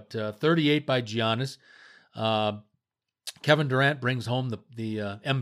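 No technical faults can be heard anywhere in the speech recording, and the signal stays continuous and steady throughout.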